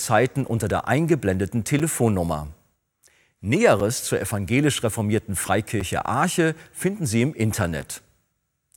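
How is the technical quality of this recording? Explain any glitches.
The recording has a gap between chunks: the speech arrives in 2.0 s blocks with 6.5 ms of silence inserted at each join, cutting hard-edged holes at 1.79, 3.80, 5.80 and 7.81 s.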